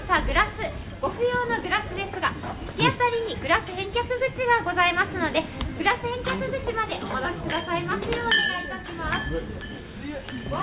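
No technical faults are audible.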